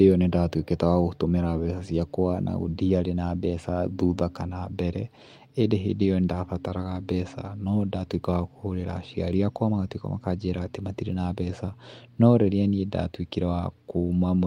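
Nothing goes wrong anywhere in this speech recording, so there's no fault to point to at any moment.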